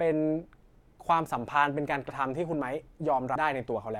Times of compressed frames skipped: 2.09-2.11, 3.34

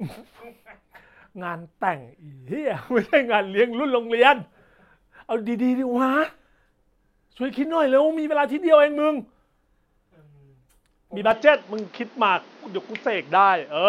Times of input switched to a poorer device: 11.31-13.88

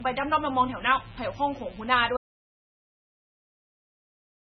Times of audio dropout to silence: 2.17-4.59

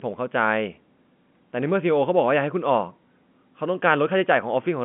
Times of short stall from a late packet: none

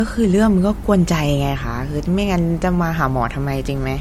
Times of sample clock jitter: none

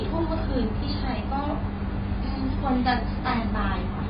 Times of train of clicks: none

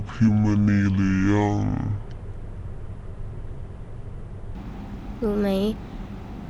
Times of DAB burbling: none

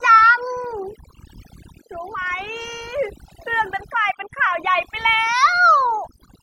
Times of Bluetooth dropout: none

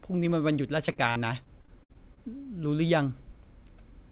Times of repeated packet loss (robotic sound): 0.86-2.19

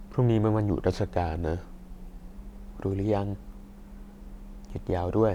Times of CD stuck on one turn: none

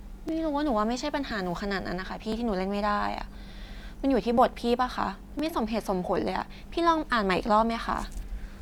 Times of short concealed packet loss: none

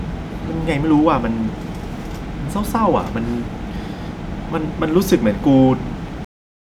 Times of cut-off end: 6.25-6.64

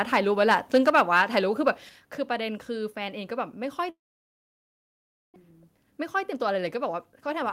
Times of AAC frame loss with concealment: none

